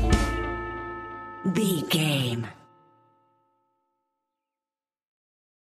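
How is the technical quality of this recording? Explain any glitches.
No glitches or technical faults can be heard here.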